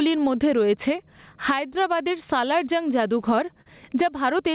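Gain pumping runs through the whole speech clip. The gain drops by about 15 dB under each loud syllable, squeezing loud and soft passages together. The likely cause is gain set far too high, with a fast limiter clamping it down.

Clock drift between sender and receiver is also present throughout. The sender's clock appears to run about 3% slow. The receiver's jitter buffer keeps draining, so it must keep stretching the audio to stay fed, leaving faint, irregular timing wobbles across the clip.

Repeated timing corrections run from 0.19 s to 3.46 s. They play the stream at about 98% speed and add around 70 ms in total. Each small insertion lengthens the sound slightly, all in the same direction, so the pacing feels subtly uneven rather than obviously broken.

A short stall from a late packet occurs between 3.62 s and 3.68 s. A packet arrived late, the buffer ran dry, and the receiver held the last sound for 44 ms before resuming. 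Nothing is lost, but one sound lingers unnaturally. Throughout, nothing is heard above 4 kHz, which fits narrowband G.711 coding on the call path.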